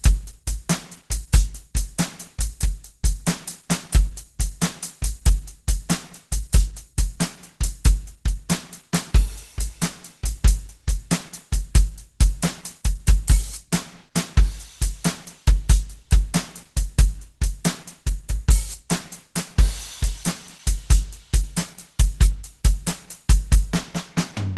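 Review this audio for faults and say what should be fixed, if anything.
Throughout the music, tones sound hoarse, grainy and somewhat muffled. On a spectrogram, everything stops at a hard ceiling at 12.1 kHz and the harmonics below look noisy and smeared. This is likely Opus compression in its hybrid speech mode, which fits a bitrate around 16 kbps. To prevent it, encode music at a higher Opus bitrate so the encoder stays in its full-band music mode.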